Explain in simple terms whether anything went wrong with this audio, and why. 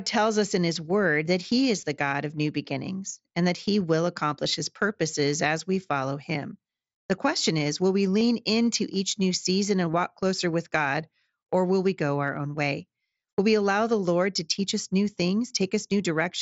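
Concealed Bluetooth headset packet loss occurs at 1.81, 4.44, 8.19 to 8.21, 9.93 and 12.28 seconds. At each point, a scrap of speech failed to make the wireless hop from headset to phone, and the phone filled the hole by repeating the closest-matching bit of the sound just before it. Each gap lasts only about 7 to 23 thousandths of a second, so these are brief blips rather than dropouts, with the longest at 8.19.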